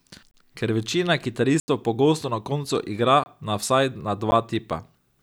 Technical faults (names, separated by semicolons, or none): block of digital silence